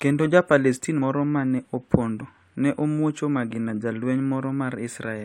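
Compressed frames were skipped three times in this speech, so the decoder jumped ahead by roughly 100 ms at 1.01 s, just before "moro ma ne", about 20 ms at 2.2 s, just after "palestin moro ma ne", and about 50 ms at 3.5 s, after "ne omwuocho". The jumps fit a 23.2 ms frame.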